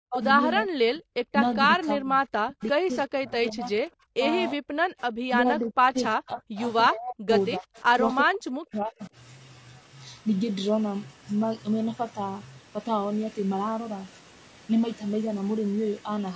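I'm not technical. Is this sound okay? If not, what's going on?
No. The whole clip sounds rough and grainy. That is likely low-delay AAC compression, the kind video calls use to squeeze audio down.

The voice keeps dipping or dropping out at 0.0–0.22, 0.62–1.0, 1.33–3.64, 4.13–4.24, 4.55–4.83, 5.42–7.68 and 8.24–9.12 seconds. This is speech suppressed in double talk. The call likely turned the voice down while both sides spoke at once.

At 7.76 seconds there is a brief, faint echo leak. A copy of the voice comes back about 0.36 seconds late, likely from a loudspeaker on the other end.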